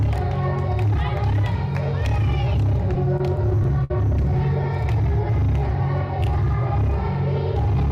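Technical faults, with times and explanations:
2.95 to 3.91 s, repeated stalls (stutter): packets arrived late, emptying the jitter buffer eight times; each gap, up to 59 ms, was bridged by extending the last sound, so it drags and stutters.
5.10 to 5.82 s, jitter buffer slow-down: the receiver rebuilt its reserve by repeating pitch periods, adding 77 ms; the sound runs at 91% speed, drawn out but unchanged in pitch.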